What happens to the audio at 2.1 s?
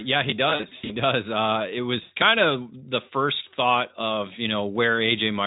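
From 2.01 to 2.12 s the speech hits VoIP packet loss concealed by the speech codec. About 100 ms of audio went missing, which fits roughly five 20 ms frames. The Speex decoder fills the gap by repeating its last pitch and spectral shape at falling gain, so the sound turns into a buzzy tone or coloured noise that fades. Unlike a plain dropout, the voice recovers gradually.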